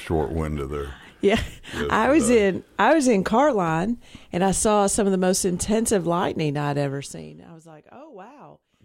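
From 6.87 to 7.38 s, a level drop of about 20 dB is applied in coarse unsmoothed steps, roughly a hundred per second, instead of a continuous ramp. Each jump clicks, so zipper noise, a fast ticking buzz, rides on the sound while it fades.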